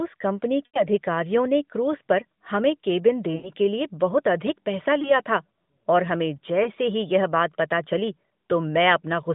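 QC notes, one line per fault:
0.66–0.82 s and 3.36–3.52 s: lost AMR speech frames, each a run of about 80 ms. Corrupted frames were dropped, and the decoder repeated the last good pitch and vocal-tract settings at falling gain, so the sound smears, then sags toward silence before returning briefly weak or rough.
5.02–5.17 s and 6.64–6.70 s: lost AMR speech frames, single 20 ms losses, heard as short dips or warbles inside the narrowband 150 Hz–3.7 kHz line.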